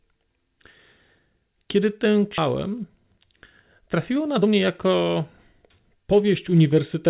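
At 2.38 to 2.40 s the speech jumps straight forward with no silence at the join. About a second and a half of speech has vanished, and the two sides butt together almost seamlessly. This is a skip ahead. A stretch of audio was discarded, either lost in transit or dropped by an overfull jitter buffer, while later audio was already queued. Playback resumed from the newer material and the delay fell by roughly the same amount.

From 4.15 to 5.16 s the speech sounds rushed but keeps its normal pitch, running at 117% speed. It happens again more gently from 5.96 to 7.07 s at 105%. These are jitter buffer speed-ups. The buffer was holding more audio than its target, so the receiver repeatedly cut out tiny pieces a pitch period or so long. That removed around a fifth of a second in the first stretch and a few hundredths of a second in the second. The audio comes through a G.711 mu-law call path, which leaves nothing above 4 kHz.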